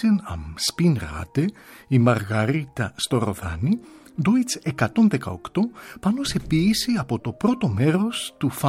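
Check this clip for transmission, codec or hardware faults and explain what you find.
Nothing in the signal points to a problem anywhere along the transmission path, in the coding stage or in the playback or capture hardware.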